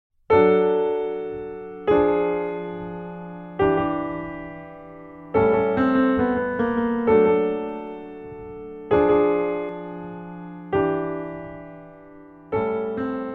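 The audio contains a doubled audio track from 3.69 s to 9.69 s. A second, full-band copy of the same sound runs around 200 ms behind the original, roughly 5 dB quieter, with no decay or room colouring of its own, so it reads as a hard slapback rather than reverb. It appears and disappears abruptly at both boundaries. The likely cause is the signal being captured twice, with one copy arriving through a slower path.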